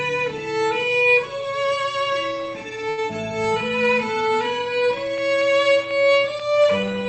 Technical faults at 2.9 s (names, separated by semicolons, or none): short stall from a late packet